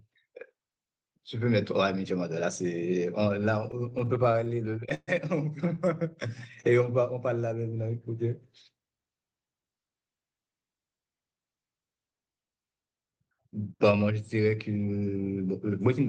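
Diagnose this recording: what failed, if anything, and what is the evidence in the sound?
Repeated stalls (stutter) affect the speech from 3.71 to 5.10 s, a network-stage fault at the receiver's jitter buffer. Packets arrived late or slower than playback, so the buffer kept running dry: about 18 short holds across that stretch, the longest 131 ms, totalling 320 ms, roughly a quarter of the span. Each hold extends the last sound, fading it in longer waits, so nothing is lost but delivery drags and stutters.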